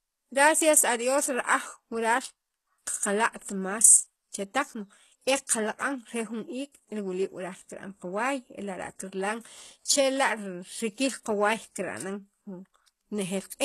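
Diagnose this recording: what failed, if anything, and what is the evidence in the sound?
The codec stage is where this went wrong, and it runs the whole length of the speech. The damage is plainly audible, and nothing reaches above 12.3 kHz. The treble is still present but sounds synthetic: gritty, metallic sibilance that never quite matches the body of the voice. That's the likely signature of HE-AAC compression at a very low bitrate, around 16 kbps. The encoder keeps only the lower band and fakes the top by copying it upward, so the harmonics don't line up.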